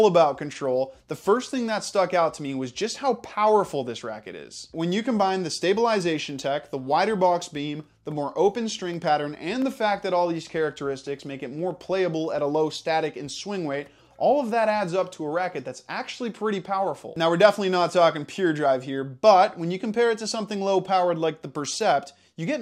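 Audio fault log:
No fault is found in this audio.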